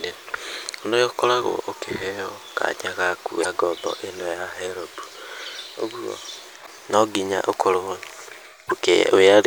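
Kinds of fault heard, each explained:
Damaged data in a compressed stream: Some bytes in the encoded speech are wrong, so the decoder misreads those frames and has to resynchronise on a later frame header. Here it produces three brief glitches near 3.41, 6.62 and 8.66 s, each lasting about 45 to 55 ms.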